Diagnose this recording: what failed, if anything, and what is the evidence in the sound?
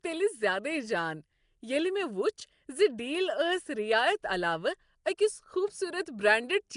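Codec trouble throughout: rough, hissy, underwater-sounding speech with nothing above 10.6 kHz. Likely Nellymoser compression, starving weak bands of bits and filling them with noise.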